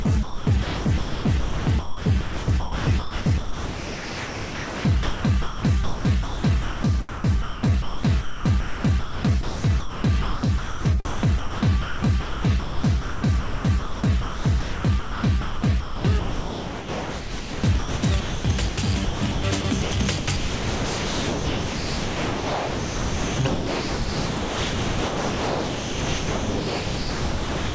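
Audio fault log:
0.02–6.83 s, 7.09–18.77 s, 19.04–19.91 s and 20.18–27.75 s: sound chopped by the voice detector. Within these four runs, about 4.65 s, 7.2 s, 0.42 s and 7.39 s of sound give way to a smooth synthetic hiss. Soft edges and quiet passages vanish. This is likely a sender-side voice detector switching off and letting comfort noise fill the gaps. Unlike a noise gate, the gaps hold noise rather than silence. Unlike packet-loss concealment, nothing is repeated or smeared. The G.722 band limit at 8 kHz stays steady through every switch.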